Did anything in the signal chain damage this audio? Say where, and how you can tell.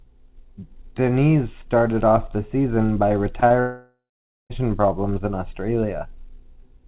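Yes. Short concealed packet loss at 3.40 to 3.44 s and again at 3.48 to 3.52 s, right after "off the season by": each is about 20 ms of audio lost in the network. The receiver papered over it by extending the preceding sound, leaving a brief smear or wobble.

A long network dropout, likely, from 3.60 to 4.52 s, just after those glitches and before "problems in". About 0.9 s of audio never arrived. The concealment stretches the last sound into a fading buzz, then roughly half a second of silence follows before the audio resumes with that stretch missing. The call path's 4 kHz bandwidth ceiling from G.711 mu-law coding can be heard throughout.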